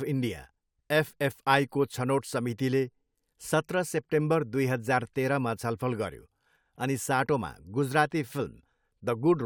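No technical faults are audible anywhere in the speech recording.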